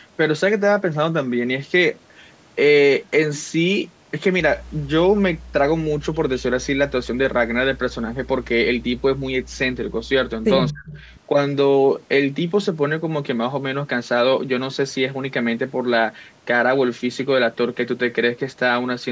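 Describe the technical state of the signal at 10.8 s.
The call's echo canceller, likely confused by both sides talking at once, turned the speech down from 10.71 to 10.89 s: speech suppressed in double talk, dipping by around 35 dB. Right after, from 10.88 to 11.0 s, an echo leak likely slipped past that canceller, returning a delayed copy of the speech 249 ms late at roughly 20 dB below it.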